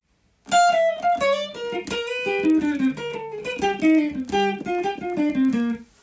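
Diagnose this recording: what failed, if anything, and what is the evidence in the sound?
The resampler restarted on every block, a sample-rate conversion fault. Across the whole clip there's a steady 20 Hz ticking, almost a low buzz, riding on the sound. Each 50 ms block got converted from 44.1 kHz to 16 kHz in isolation, so every block edge picks up a small error.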